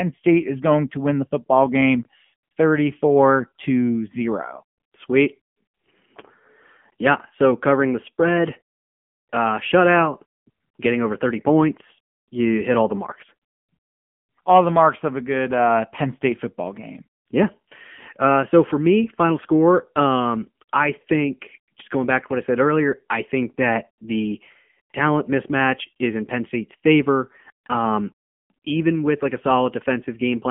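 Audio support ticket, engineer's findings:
AMR narrowband mobile codec, throughout. Speech band-limited to roughly 150 Hz–3.4 kHz, nothing above 3.5 kHz; buzzy, synthetic voicing. Spectrogram: hard ceiling near 3.5 kHz, empty above, thinned lows under 150 Hz. Cause: telephone-path speech coding; low-bit pulse excitation driving a vocal-tract model. Buzz and plainly audible damage fit AMR-NB at 7.95 kbps.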